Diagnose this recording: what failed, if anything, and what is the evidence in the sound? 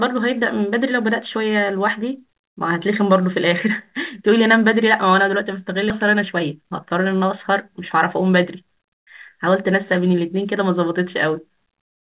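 At 5.90 to 5.92 s the speech jumps forward with no gap, and about a second of it is simply missing. This is a skip ahead in the network and jitter-buffer stage: queued audio was discarded while later packets were already waiting, and the two sides were spliced directly.

Right after the jump, from 6.08 to 9.02 s, the speech runs about 5% fast at unchanged pitch and sounds slightly hurried. It happens again from 9.47 to 10.21 s at about 6%. This is jitter buffer speed-up: the buffer held too much audio, so it repeatedly cut out short pitch-period segments, removing roughly 150 ms and then 50 ms. The G.711 mu-law call path limits the speech to the band below 4 kHz.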